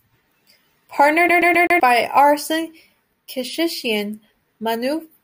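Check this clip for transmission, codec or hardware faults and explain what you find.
There's one fault here: from 1.29 to 1.80 s the speech gets a CD stuck on one turn, with a scratch throwing the laser back so a 129 ms slice stutters four times with tiny mutes.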